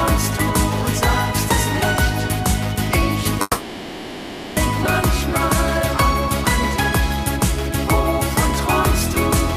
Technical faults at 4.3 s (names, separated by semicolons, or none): call audio freeze